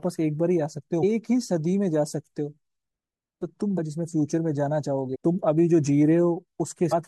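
Damaged data in the compressed stream corrupts three short stretches of this speech, at about 1.02 s, from 5.14 to 5.16 s, and from 6.91 to 6.93 s. In each spot some of the encoded bytes are wrong, so the decoder misreads those frames, loses sync and hunts for the next valid frame header. Each event lasts only a couple of hundredths of a second and comes through as a brief chirp, squawk, click or short hole in the speech.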